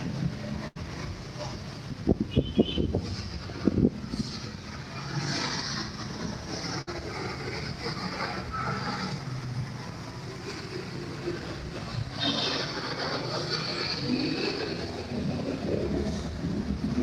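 Burst of packet loss at 0.67 s and 6.81 s. Each time, about 80 and 60 ms went missing. The last sound is stretched and faded, then playback jumps ahead.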